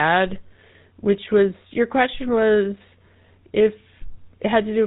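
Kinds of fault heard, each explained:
GSM full-rate codec: This is the first GSM mobile speech codec. It models the vocal tract as a filter and drives it with a sparse train of regularly spaced pulses, keeping only every third excitation sample. Nothing above 4 kHz gets through. Here the damage is plainly audible across the whole speech clip. The speech sounds buzzy and gravelly, with a muffled, band-limited top end. The coarseness fits a 13 kbps full-rate stream.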